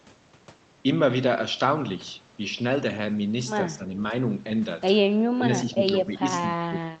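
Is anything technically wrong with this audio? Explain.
Yes. Speech suppressed in double talk, likely from an echo canceller that couldn't tell the far side's echo from the near talker, dips the speech at 3.7–3.89, 5.35–5.44, 5.64–5.81, 5.99–6.24 and 6.58–7.0 s. Drops range from slight to about 25 dB.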